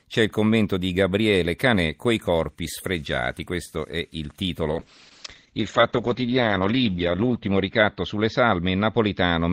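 At 4.73 s a call bitrate drop sets in and lasts to the end of the clip. The connection's bandwidth estimate fell, so the encoder was cut from 32 kbps to 8 kbps, and the audio bandwidth narrowed from 20 kHz to 8 kHz. The speech loses its top end and turns coarse, watery and muffled. The bitrate sits at its lowest for about 2.4 s and has not returned to 32 kbps by the end.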